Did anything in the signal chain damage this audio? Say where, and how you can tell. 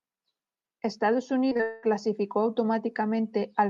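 Yes, the network stage: repeated packet loss (robotic sound) from 1.49 to 1.85 s. Four gaps, longest 196 ms, get patched by stretching earlier audio, so about 72% of that stretch is patched and it sounds choppy.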